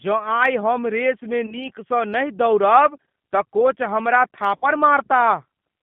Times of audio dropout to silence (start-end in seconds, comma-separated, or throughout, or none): none